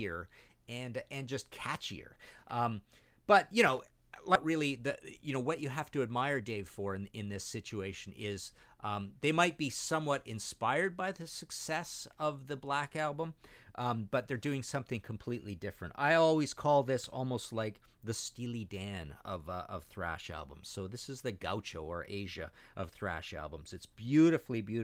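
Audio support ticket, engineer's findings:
Skip ahead at 4.35 s. About a second of speech missing, joined with no gap. Jitter buffer likely discarded queued audio to shed built-up delay.

Jitter buffer speed-up, 4.45 to 7.21 s. Speech runs 107% fast at unchanged pitch, sounds hurried. Receiver trimmed pitch-period slices, about a fifth of a second in total.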